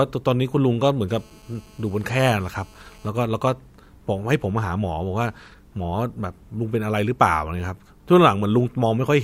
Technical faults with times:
1.09-3.09 GSM phone buzz

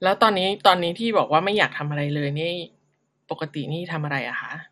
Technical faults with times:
0.00-4.71 MP2 compression

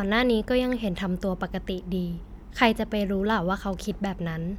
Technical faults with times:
none

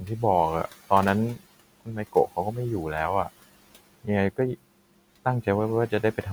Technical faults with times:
1.35-2.57 speech cut by the noise suppressor

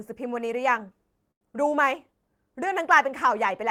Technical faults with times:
1.31-1.43 short stall from a late packet

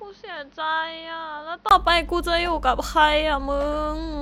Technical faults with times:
0.00-4.21 mains hum
0.00-1.71 input switched to a poorer device

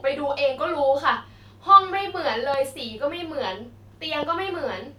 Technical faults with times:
2.54-2.56 loud pop
4.23-4.25 loud pop

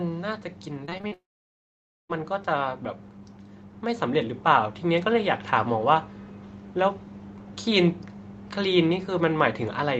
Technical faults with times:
0.85-1.13 repeated packet loss (robotic sound)
1.13-2.11 long network dropout
3.82-5.33 automatic gain rising

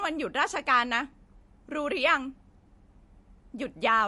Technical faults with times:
0.00-4.08 MP3 compression

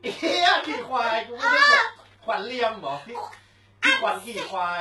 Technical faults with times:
0.00-4.81 HE-AAC compression

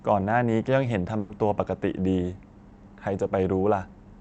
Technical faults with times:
1.19-1.31 call audio freeze

